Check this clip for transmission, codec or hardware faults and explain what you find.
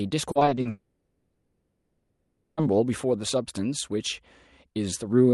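Two transmission faults appear, both early in the clip.

Repeated packet loss (robotic sound) runs from 0.31 to 0.67 s. Six short gaps occur, the longest 40 ms. Each is patched by stretching the preceding sound. About 160 ms is concealed, 44% of that span, so the speech turns choppy.

From 0.69 to 2.59 s the audio stops arriving for about 1.9 s, and the lost section never returns. The receiver keeps filling the hole with a continued, fading buzz and low noise rather than true silence. This is likely a long network dropout. Speech resumes afterward with that stretch missing.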